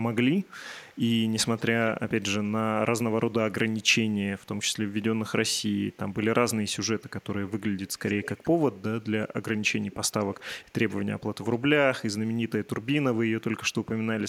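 Echo leak appears in this speech seven times. Brief faint scraps come at 0.43, 0.91, 3.78 and 5.92 s. Longer, clearer stretches run from 1.57 to 1.91 s, 6.99 to 8.59 s and 9.82 to 11.46 s. The copy trails the speech by 211 ms at first, then 194, 169 and 152 ms. It ranges from barely audible to roughly 15 dB below the speech. A loudspeaker's echo canceller likely let the far side's pickup through.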